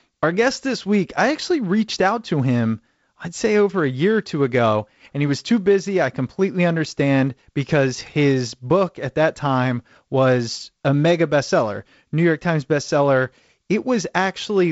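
Speech recording with no audible technical faults.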